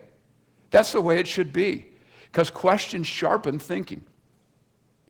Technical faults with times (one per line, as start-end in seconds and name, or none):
0.00-5.09 Opus voice compression